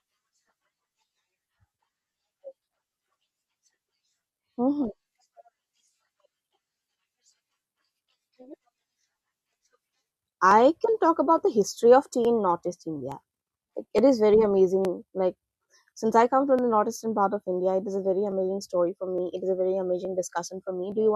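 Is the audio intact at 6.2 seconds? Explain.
No. At 6.2 seconds the speech is inside a steady train of clicks, one every 0.867 s from 0.10 to 20.92 s. These are clock drift buffer slips, likely from two mismatched device clocks forcing a few dozen samples to be dropped or repeated each time.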